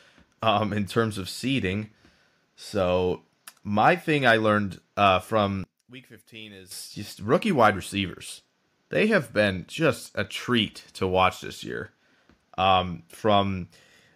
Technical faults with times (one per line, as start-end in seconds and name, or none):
5.64-6.71 one channel inverted